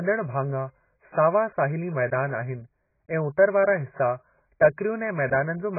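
AAC compression damage runs through the whole clip: the speech is dull and smeared, with a warbling, fizzy texture on sustained sounds and sibilants, and nothing is left above 2.5 kHz. This is likely heavy AAC-LC coding at a very low bitrate, consistent with around 12 kbps. Starved of bits, the encoder drops the upper band entirely and quantises the remaining frequency lines so coarsely that the spectrum develops holes and shimmering artefacts from frame to frame.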